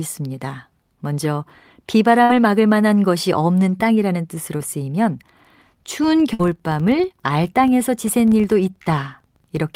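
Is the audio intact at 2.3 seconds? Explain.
No, there's a burst of packet loss from 2.23 to 2.31 s. The receiver stretches and fades the last sound for about 58 ms, then jumps ahead, skipping roughly 60 ms.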